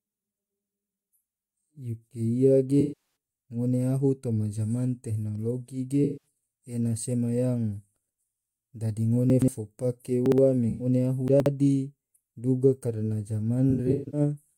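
At 2.80 to 3.14 s and 6.04 to 6.26 s, AAC frame loss with concealment replaces about 384 ms and 192 ms of audio with a smeared, noisy, phasey wash built from the last good spectrum. Unlike a dropout, there is no gap.

At 9.30 to 9.48 s and 10.26 to 10.38 s, chunks out of order make a 60 ms piece play two and then one chunk late. It sounds like a jumbled stutter at the hard joins, but nothing is smeared or missing.

At 10.69 to 10.86 s, a brief concealed loss of about 107 ms smears the sound again.

At 11.28 to 11.46 s, another 60 ms chunk lands two chunks late.

From 13.70 to 14.20 s, about 277 ms of concealment is scattered in bursts, the longest around 150 ms, giving a broken, washy flutter.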